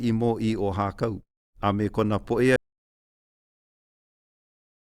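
At 2.56 s the speech just stops dead: an audio dropout to silence running to the end, likely a lost input with silence written, no room tone at all.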